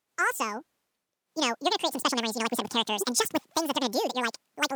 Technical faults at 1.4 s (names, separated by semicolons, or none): wrong sample rate